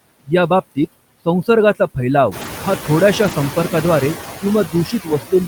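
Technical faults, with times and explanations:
Throughout, noise suppressor artifacts: the suppressor lowers the bands it judges to be steady noise by about 14 dB, frame by frame. The background sinks in pauses and returns under speech. This gets more noticeable after the room noise rises by about 12 dB at around 2.5 s and sits about 9 dB below the speech. The suppressor then has more to remove, so its gating grows more audible.
2.41–2.47 s and 3.23–3.33 s, lost packet rebuilt from error correction: both spots play without a gap, but they turn briefly rougher and noisier. The second comes just after "फैलाव हा". Lost packets were replaced by the low-bitrate copies carried in the following packets, and the decoder played those coarser copies. The rebuilt spans are 40 ms and 60 ms, which fits two and then three 20 ms packets.
4.67 s to the end, speech cut by the noise suppressor: the final stretch sounds swallowed and faint, dropping by up to about 17 dB. 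The suppressor mistook this part of the speech for background noise and turned it down along with the noise.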